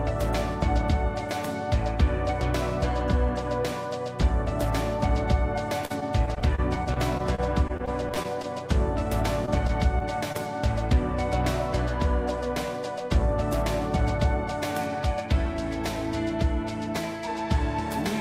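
From 5.85 to 8.46 s, repeated packet loss (robotic sound) sets in: packets keep going missing, what sounds like well over a dozen holes, the longest about 46 ms. Each is patched by stretching the previous sound, giving a choppy, robotic texture with fragments missing.

Between 9.46 and 10.36 s come scattered short gaps: a handful of isolated packets lost, each under roughly 20 ms, concealed by extending the last sound. The result is brief ticks and small hiccups rather than sustained distortion.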